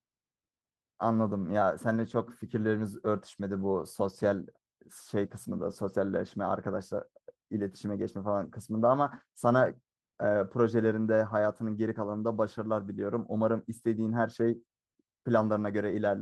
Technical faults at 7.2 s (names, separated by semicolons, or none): none